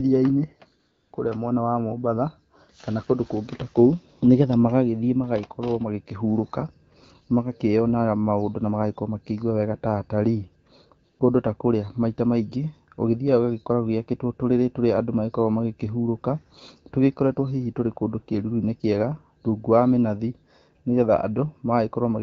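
AMR comfort noise fills 0.79 to 1.13 s, just before "kũrĩa mwena wa", and again briefly at 11.11 to 11.19 s. The phone stopped sending speech frames, and the receiver substituted smooth synthetic noise for the real background, which switches in and out audibly.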